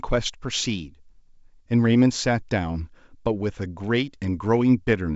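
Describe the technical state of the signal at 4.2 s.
At 4.2 s the speech is intact, carried over G.722 wideband telephone coding at 64 kbit/s, which leaves at most a faint trace on the sound.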